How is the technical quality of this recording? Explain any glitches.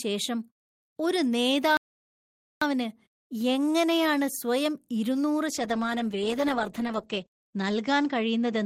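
The recording has two clear faults. One is a gap in playback and the other is a loss of clarity near the end.

At 1.77 s the speech cuts out for about 0.84 s, resuming at 2.62 s. This is a playback stall. The player most likely ran short of data or its thread was blocked. Output falls silent mid-flow, then continues.

From 5.47 s, right after "എങ്ങനെയാണ് സ്വയം ഇരുന്നൂറ്", a call bitrate drop sets in and lasts to the end. The encoder falls from 40 to 11 kbps. Bandwidth shrinks from 20 kHz to 8 kHz. The speech turns coarse and muffled, losing its upper detail.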